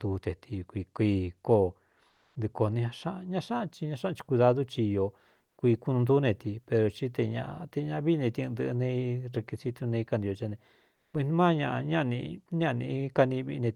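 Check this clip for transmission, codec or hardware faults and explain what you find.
The clip has one kind of fault: comfort noise in place of the background, in three short pauses in the speech. It occurs at 2.09 to 2.35 s, 5.45 to 5.57 s and 10.95 to 11.13 s. These gaps last 260, 120 and 180 ms. Here the real background sits about 52 to 56 dB below the loudest speech. In each gap it turns into a smoother noise. The level shifts by about 7, 3 and 5 dB. Likely cause: Opus DTX, where the sender goes quiet and the receiver makes up noise. The call path's Opus coding tops out near 12 kHz.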